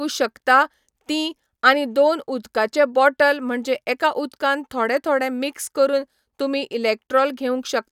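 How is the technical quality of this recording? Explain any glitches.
Nothing in this speech recording stands out as a glitch, so there's nothing here that needs explaining.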